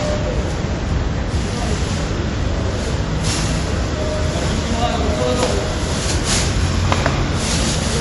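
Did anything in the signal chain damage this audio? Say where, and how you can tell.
Yes, at the codec stage. Throughout, the sound has nothing above 11.3 kHz and two different kinds of codec artefacts heard together. This is likely transcoding between lossy codecs, a low-rate MP3-like encode later re-encoded to WMA.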